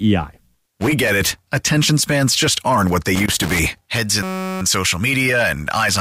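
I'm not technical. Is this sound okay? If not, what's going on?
No. From 0.54 to 1.09 s, and again from 3.16 to 3.97 s just after "just aren't what they", there's loose connector crackle: a worn plug cutting in and out, giving irregular scratchy bursts. From 4.23 to 4.61 s a system hang loop replays one tiny 5.33 ms snippet as a steady 188 Hz buzz, which fits a 256-sample buffer. Unlike the crackle, this buzz is perfectly even.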